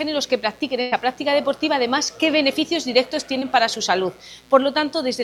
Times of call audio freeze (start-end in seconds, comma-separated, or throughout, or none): none